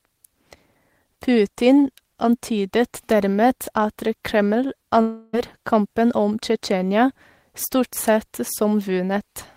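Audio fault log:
5.01–5.35 s, long network dropout: audio likely stopped arriving for 0.32 s, so the receiver filled the gap with a fading buzz; speech resumes at "kampen om" with that stretch lost.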